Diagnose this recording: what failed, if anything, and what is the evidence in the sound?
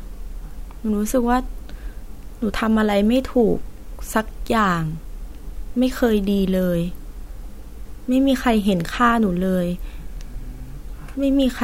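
Nothing failed; no fault is audible in this recording.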